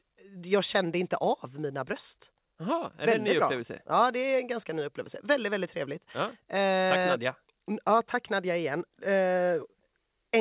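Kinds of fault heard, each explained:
No faults can be heard.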